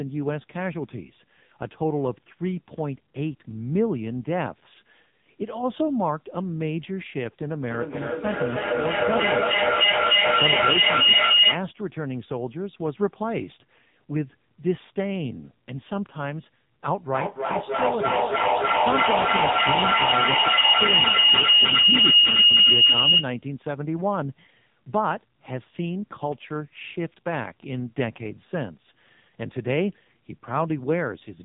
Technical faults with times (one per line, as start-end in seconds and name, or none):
0.00-31.44 AMR narrowband mobile codec